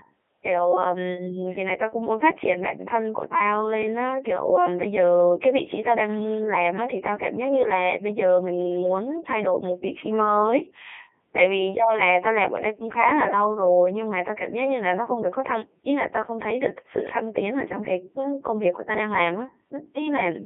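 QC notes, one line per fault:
throughout: Codec 2 vocoder. The speech is rebuilt from sine waves, so it is heavily robotic and buzzy rather than just muffled as with band-limiting. The band runs 250 Hz to 3.4 kHz.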